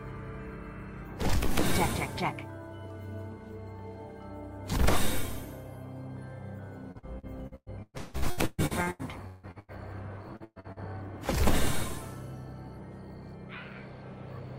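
Repeated packet loss hits twice, from 6.91 to 9.71 s and from 10.36 to 10.79 s. In each stretch about half the audio is lost and patched by extending the preceding sound, with gaps up to 164 ms, so the audio turns choppy and robotic.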